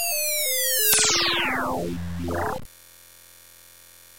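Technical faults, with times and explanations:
Throughout, low bit depth without dither: the audio was likely cut to about 6 bits by plain truncation with no dither, so the rounding error tracks the sound itself, leaving a grainy, signal-following distortion roughly 20 dB below the level, harshest on quiet passages.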